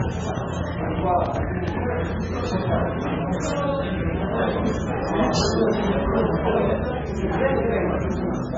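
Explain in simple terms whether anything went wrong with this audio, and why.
Yes, two things went wrong. The audio was likely squeezed hard by MP3 compression to save space, leaving too little data to describe it properly. Everything above about 7.5 kHz is gone, so it sounds dull, and the faint parts warble in a watery, swirly way throughout.

At the very start, from 0.01 to 1.69 s, there is a train of clicks: around fifteen sharp ticks, roughly eight per second but unevenly spaced, standing out well above the sound. This likely came from electrical interference or a faulty connection.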